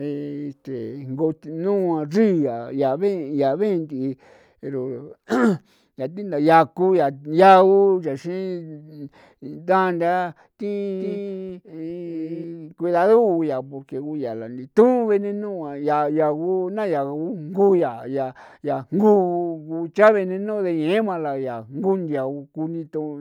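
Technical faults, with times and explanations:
11.00–12.44 s: doubled audio track. A full-band copy of the speech trails about 0.4 s behind, roughly 5 dB quieter, likely captured again through a slower path, so a dry, undecaying repeat is heard. On a spectrogram the harmonic pattern appears twice, offset in time, with abrupt start and stop edges.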